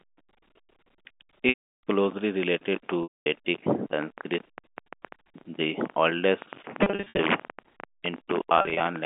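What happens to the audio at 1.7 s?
Packet loss with pitch repetition, 1.49 to 1.82 s: 340 ms of audio is lost, and the receiver fills the gap by repeating the last pitch period. That held, buzzy tone fades out over about 50 ms, leaving silence until speech cross-fades back.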